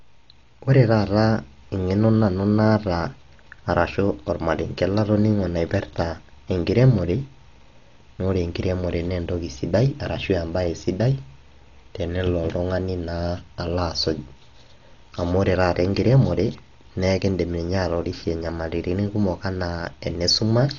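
Speech, heavily degraded throughout by what is likely Dolby Digital compression. Nothing survives above 6.9 kHz, so it sounds dull, and many bands are dither-filled, leaving a rough, fluttering noise around voiced tones. That fits a starved bitrate near 40 kbps.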